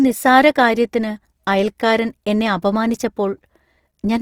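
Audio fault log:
throughout, Opus compression. The speech sounds rough and grainy across the whole clip, and the damage is plainly audible. High frequencies remain present, so the sound is not muffled. Instead, fine detail in the upper bands turns noisy and coarse. The likely cause is Opus coding in its music mode. That mode keeps each band's overall energy. Short of bits, it fills in detail by copying lower bands or adding noise. The grain fits a rate near 24 kbps.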